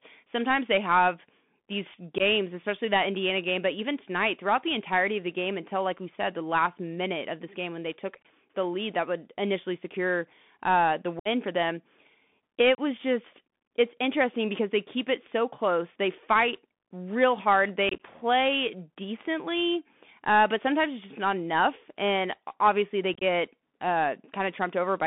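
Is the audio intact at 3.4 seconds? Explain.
No. At 3.4 seconds, as throughout the clip, the speech has passed through a Bluetooth CVSD headset codec. This narrowband headset path codes each sample as a single up-or-down bit whose step size adapts, consistent with the 64 kbps CVSD link. The band is held to roughly 200 Hz to 3.5 kHz, so the speech sounds thin and telephone-like, with scratchy s sounds, distortion where the step can't keep up, and a granular hiss underneath.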